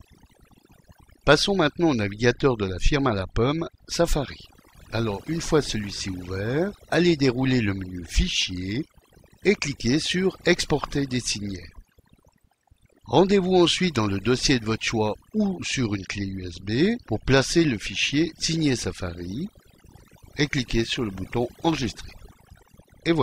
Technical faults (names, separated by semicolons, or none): overdone noise removal